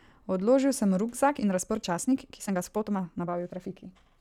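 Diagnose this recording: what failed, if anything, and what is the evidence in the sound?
From 1.25 s to the end the speech suddenly turns rushed at unchanged pitch: a time-stretched section, likely software compressing it about 1.37 times by dropping short pieces.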